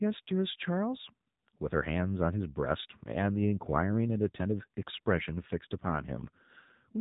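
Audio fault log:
Throughout: AMR narrowband mobile codec. The speech has passed through AMR-NB, the 2G and 3G phone codec. Nothing above 3.8 kHz survives, so the sound is thin and boxed in. The codec rebuilds each 20 ms frame from a vocal-tract model excited by a few pulses. Few bits were spent here, which fits a low mode near 7.4 kbps. The damage is plainly audible. The result is a buzzy, synthetic edge on the speech.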